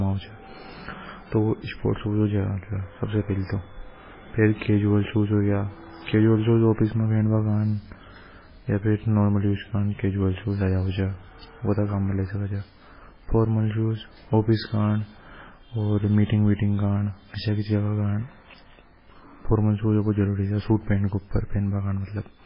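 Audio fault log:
throughout, MP3 compression: the speech stops dead at 5.3 kHz and swirls heavily as weak frequency lines drop in and out between frames, likely a bit-starved MP3 encode consistent with about 16 kbps. A plain low-pass filter would dull it without that swirl.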